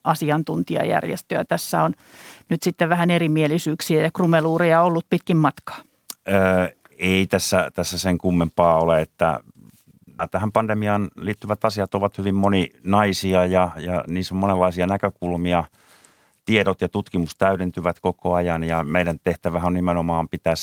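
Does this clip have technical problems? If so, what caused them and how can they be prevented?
Yes. At 10.19 s there is a skip ahead: roughly 0.4 s of speech is missing, and the audio on either side is butted together with no fill. This happens when audio that arrived late or overflowed the jitter buffer is discarded while later audio is already queued. Playback then jumps forward, losing part of the utterance and cutting the accumulated delay. Prevention: size the jitter buffer adaptively so bursts can be absorbed without discarding queued audio.

From 10.35 to 12.27 s there is a jitter buffer speed-up. The speech runs at about 110% of normal rate with unchanged pitch, so it sounds hurried. The buffer was holding more audio than its target. The receiver shortened it by removing many short pitch-period segments in succession, about a fifth of a second in total. Prevention: reduce network jitter and spread buffer drain-down more gradually over time.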